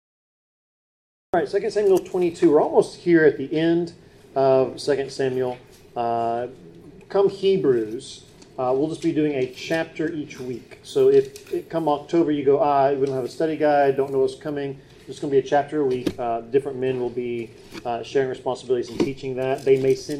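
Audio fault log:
0.00–1.34 s, cut-off start: the clip opens on about a second and a third of dead digital silence, then the sound just appears at 1.34 s already in full flow, with no attack and no fade-in. That's the giveaway that capture began late, so we're dropped into the middle of something that was already going, and whatever led up to that moment simply never made it into the file.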